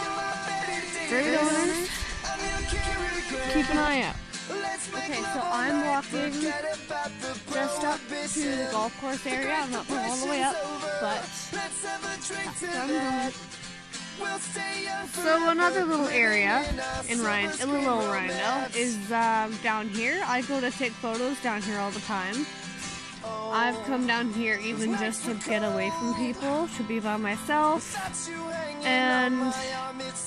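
From the very start until about 3.88 s, the audio carries a doubled audio track: a second, full-band copy trails the original by roughly 150 ms at a few decibels lower, about 5 dB down. Unlike a room echo or reverb, this copy has no decay tail and no added room colour, and it stops abruptly at 3.88 s. The likely cause is the same signal being captured again through a slower path.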